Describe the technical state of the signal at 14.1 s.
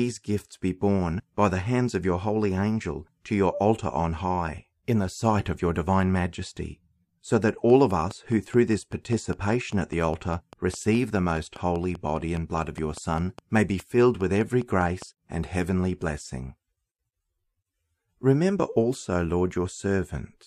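A train of clicks runs from 7.49 to 15.03 s: regular, near-identical pops at about 4.9 per second, peaking about 5 dB above the speech, likely from electrical interference.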